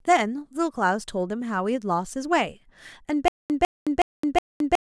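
Stutter with silent gaps from 3.28 s onward: a 151 ms fragment repeats four times between 217 ms silences, likely a stalled stream replaying its last chunk.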